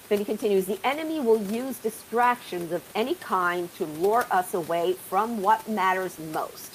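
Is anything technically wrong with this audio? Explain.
No, nothing is technically wrong.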